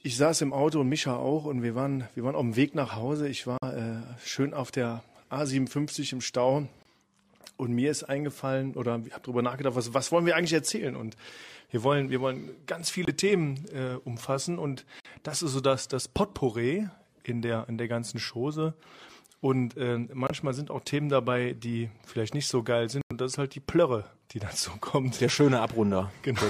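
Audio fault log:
3.58 to 23.12 s, corrupt frame muted: abrupt silent gaps at 3.58 s (60 ms), 6.83 s (40 ms), 13.05 s (30 ms), 15.00 s (80 ms), 20.27 s (80 ms) and 23.01 s (110 ms). Bit errors made the decoder reject whole compressed frames, and the player substituted silence, so each hole spans one or more frame lengths while timing holds.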